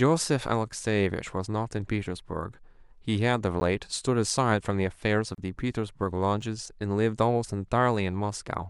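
At 3.60 s and again at 6.42 s the speech drops into a block of digital silence, about 10 ms and 4 ms long. The output buffer was likely not filled in time, so samples became zeros. The edges are dead square, giving a bare tick or pop. At 5.35 to 5.38 s a 32 ms gap at a join of encoded pieces opens. Encoder start delay and final-frame padding were left in where two pieces meet. Unlike the buffer dropouts, its edges are smeared, and the speech resumes exactly where it broke off.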